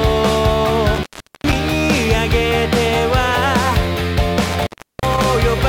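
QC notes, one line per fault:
0.95–1.53 s and 4.45–5.24 s, intermittent contact: a loose cable or plug briefly lets go twice. The sound drops out for about 0.41 s and then 0.37 s, with crackle at the edges as the contact scrapes, and faint hiss in the gap.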